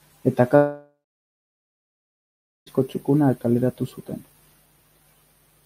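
A speech clip in which, at 0.55 s, the sound abruptly gives way to a buzzy hiss that carries on the last moment of audio and fades over a few tenths of a second. About 1.7 s of silence follows, and the speech resumes at 2.68 s with roughly 2.1 s of material simply gone. This is likely a long network dropout: no audio reached the receiver for that stretch, so it extended the final fragment as fading noise and then fell silent until the stream returned.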